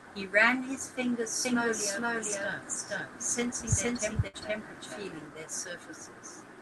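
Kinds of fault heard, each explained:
Doubled audio track: From 1.45 to 5.27 s, a full-band copy of the speech runs about half a second behind at roughly equal level, likely from a second, slower capture path. Unlike an echo, it has no decay or room colour and cuts in and out abruptly.
Burst of packet loss: At 4.27 to 4.36 s, the receiver stretches the last sound for 60 ms while fading it, then resumes with 60 ms of speech skipped. Unlike a plain dropout, there is no silence, only a fading held sound and a jump.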